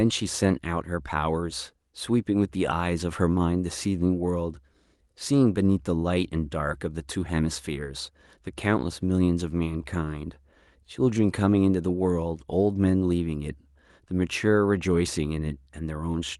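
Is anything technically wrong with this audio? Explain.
No, no technical faults heard.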